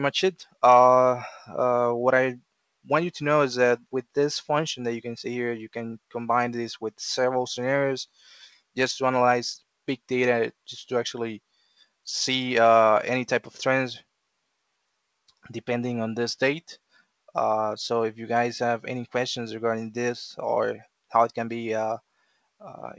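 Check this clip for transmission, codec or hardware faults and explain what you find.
One fault recurs: sound cut by the noise suppressor, at 0.39–0.63, 3.79–4.16, 8.08–8.76, 11.53–12.06 and 22.0–22.62 s. The suppressor mistook sound for noise and pulled it down by about 17 to 21 dB, for up to half a second each time. The call path's band stops at 8 kHz, which fits G.722.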